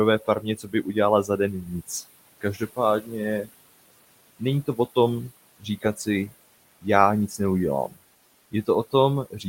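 A speech clip with three problems. Throughout, the audio sounds grainy and rough. Quiet passages turn gritty, and the faintest sound sputters or drops to silence. The grain moves with the speech rather than sitting underneath it as steady hiss. The likely cause is low bit depth without dither, with samples rounded to about 8 bits. That leaves an error floor roughly 30 dB below the signal. Because no dither was added, the error tracks the waveform and is heard as distortion, not noise. Noise suppressor artifacts are also present all the way through. The suppressor pulls down bands it judges to be steady noise, by about 20 dB. Background noise sinks in the gaps and swells back under the speech. The room noise, about 18 dB below the speech, is what the suppressor is fighting. The suppressor also cuts into the speech itself. This happens from 0.19 to 3.49 s, with about a second affected in total and drops of up to about 17 dB. 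It happens again from 4.39 to 7.98 s, with about half a second affected and drops of up to about 16 dB. A third stretch runs from 8.52 s to the end, with drops of up to about 15 dB. Parts of the speech are treated as noise and sound swallowed or faint.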